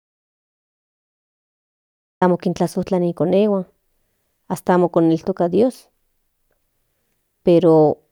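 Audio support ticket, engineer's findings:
Audio dropout to silence, 0 to 2.22 s, already under way at clip start. Input path likely lost (device disconnect, failed link or mute) while recorder kept writing silence. Result: silence, no room tone, then speech begins abruptly mid-flow at 2.22 s. Content during gap unrecoverable.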